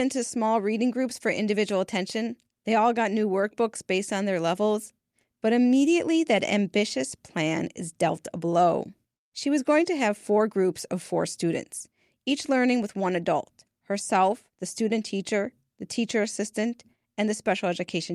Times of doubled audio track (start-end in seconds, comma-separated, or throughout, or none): none